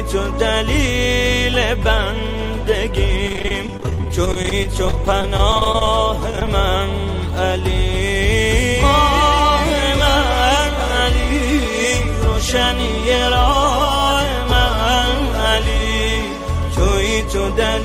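From 3.27 to 6.48 s the audio breaks up with repeated packet loss (robotic sound). Dozens of brief holes open in quick succession, none longer than about 25 ms, and each is papered over by stretching the sound just before it. Roughly a sixth of the stretch is patched this way, giving a choppy texture with fragments missing. Unlike a single dropout or one concealed gap, the damage is a rapid, sustained stutter across the whole three-second span.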